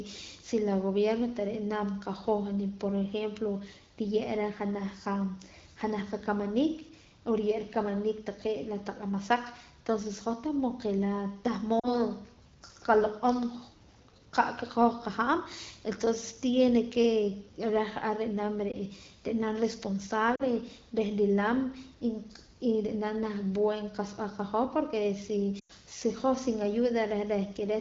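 Lost AMR speech frames at 11.79–12.01 s, 18.71–18.76 s, 20.35–20.43 s and 25.59–25.72 s: corrupted frames were concealed by repeating the last good pitch and vocal-tract settings at falling gain. Unlike a hard dropout, each gap is concealed instead of cutting out: the single lost frame at 18.7 s gives a brief dip or warble, and the longer runs drop to near silence within two frames, the longest being the 100 ms run at 25.6 s, over the light coding damage of the wideband codec.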